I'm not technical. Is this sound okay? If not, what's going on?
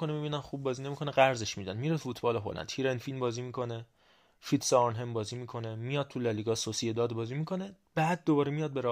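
Yes, it sounds fine; nothing here needs fixing.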